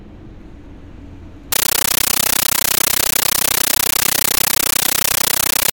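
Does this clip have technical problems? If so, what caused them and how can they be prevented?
Yes. From 1.52 s onward, a compressed stream is played as audio: an undecoded AC-3 bitstream is read as raw samples, giving loud static in 13.3 ms bursts repeating 31.25 times a second. That steady chatter distinguishes it from continuous hiss. Sending decoded PCM, or enabling decoding at the receiver, prevents it.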